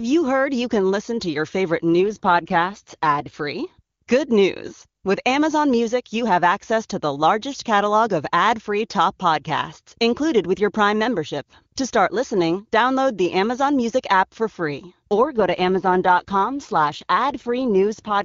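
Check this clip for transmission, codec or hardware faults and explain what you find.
The clip has two AMR rate drops in the wideband call path. From 2.09 to 3.34 s, after "listen to your favorite", and from 15.16 s to the end at 18.24 s, after "app for free", the link forces the codec down to a lower bitrate, consistent with 23.85 falling to about 8.85 kbit/s. The speech turns rough and synthetic, with the same bandwidth and no gap.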